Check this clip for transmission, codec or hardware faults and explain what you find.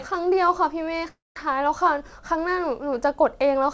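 One fault is audible, over a G.722 call path that carries nothing above 8 kHz. From 1.08 to 1.37 s the speech smears into a fading buzz, then near silence, and resumes with audio missing: likely a long network dropout that the receiver papered over with concealment.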